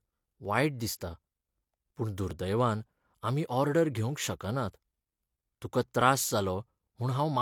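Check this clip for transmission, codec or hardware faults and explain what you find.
One fault is audible: a regular click recurring through the speech, most likely clock drift buffer slips. From about 0.45 s to 6.01 s there are roughly four slips, one every 1.86 s. Two devices clocked independently let the buffer between them creep toward full or empty until a small block of samples, roughly 70 here, is dropped or repeated. A steady interval like this fits a clock mismatch on the order of several hundred ppm. Each slip is heard as a brief click or pop in the speech.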